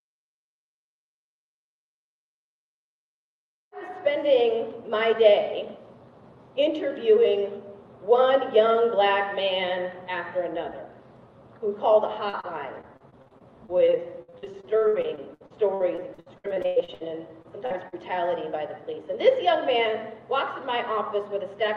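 Brief smears and wobbles at 12.29, 12.41, 17.42, 17.66 and 17.88 s are short concealed packet loss: gaps of 20 to 40 ms were patched by extending the preceding sound. From 12.81 to 17.02 s the audio turns choppy and robotic, the sign of repeated packet loss, with about a quarter of that stretch synthesized to cover gaps up to about 0.1 s.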